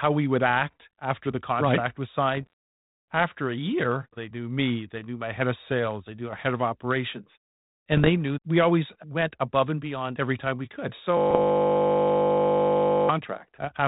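Bit errors on an ADPCM link hit the speech at 2.32 to 2.53 s and again at 7.92 to 8.09 s. The link sounds like 32 kbit/s G.726 with light coding damage. Flipped bits, at an error rate of around half a percent, corrupt the difference codes. Each corrupted code also knocks the decoder's adaptive step size and predictor off course, so the damage rings on briefly. The result is pops and rough, grainy bursts with short jumps in level.

A system hang loop runs from 11.17 to 13.09 s. The machine froze while the audio hardware kept replaying the same 20 ms of its ring buffer, close to a hundred times. A loop that short does not sound like repeated sound. It fuses into a steady 50 Hz buzz that holds for nearly two seconds. Within it, from 11.30 to 11.41 s, further ADPCM bit errors add a rough burst and level jumps to the buzz.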